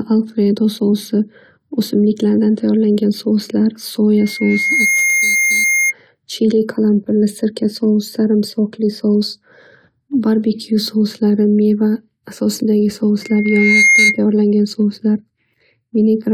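A microphone picking up the loudspeaker it feeds has closed a loop whose gain tops one at about 2.1 kHz, so this speech recording carries loudspeaker feedback squeal twice. From 4.17 to 5.93 s a single 2.1 kHz tone swells over under a second to about the level of the speech. From 13.22 to 14.19 s the same tone returns, building as quickly and peaking somewhat louder than the speech.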